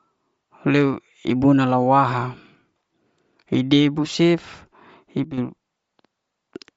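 From start to finish the speech has a grainy, breathy edge and nothing above about 7.7 kHz, with noise-like fizz where detail should be. This is likely Bluetooth LC3 compression, coding in 10 ms frames at a low bitrate, near 32 kbps, and filling discarded upper bands with noise.

At 5.24 s the level drops abruptly by about 10 dB, voice and background together, and snaps back at 5.38 s. This sudden gain jump likely comes from a gain change applied between samples without any ramp.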